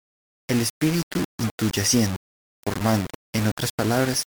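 Low bit depth without dither runs throughout the speech: a grainy, rasping distortion sits roughly 15 dB below the voice and shifts with it, and quiet stretches sputter or drop out. That likely comes from rounding to about 4 bits without dither, so the error tracks the signal.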